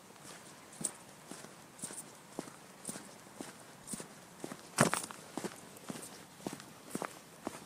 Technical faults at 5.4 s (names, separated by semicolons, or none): none